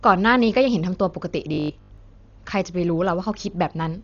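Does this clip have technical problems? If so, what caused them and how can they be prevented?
Yes. Throughout the clip the audio was likely squeezed through Dolby Digital compression at a very low bitrate, the kind of setting near 40 kbps that makes the encoder narrow the band and give many frequency lines no precise values, leaving the decoder to fill them with noise. The result is heavy damage: the speech sounds dull and muffled, with a rough, fluttering grain around voiced sounds. Encoding at a higher bitrate, or with a less aggressive codec setting, would prevent this.

From 1.54 to 1.98 s, new audio likely arrived too slowly for playback, so the software kept replaying its last short buffer instead of waiting, while about half of the real audio in that stretch was skipped. Each repeat lasts about 20 ms, which forces a steady 50 Hz buzz onto the sound and turns the speech into a rigid, metallic drone that only loosely tracks what is being said. 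A larger jitter buffer, or proper packet-loss concealment in place of blind repetition, would prevent it.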